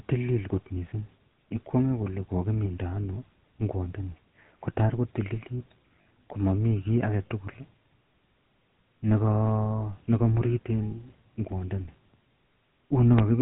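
Throughout, the speech has passed through the GSM full-rate codec, whose character fits the 13 kbps rate. The codec rebuilds the vocal tract from a sparse pulse excitation and discards everything above 4 kHz, so the voice comes out dull-topped, with a plainly audible buzzy, gravelly roughness.

Between 6.02 and 6.05 s, after "ano ingwat ndoni kotakotililit" and before "komamii kit agetugul", come lost GSM frames. The decoder covered a gap of about 40 ms, which fits two lost frames, by repeating the last good frame's settings, leaving a brief rough, metallic ring.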